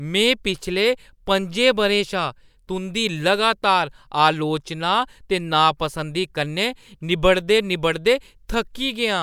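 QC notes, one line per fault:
Nothing to flag on this speech recording, so there's no fault to log.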